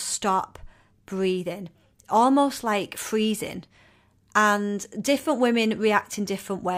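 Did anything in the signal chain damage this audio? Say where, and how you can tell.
No, nothing in the signal chain has left an audible mark on this speech recording, with no stage from capture to playback showing any damage.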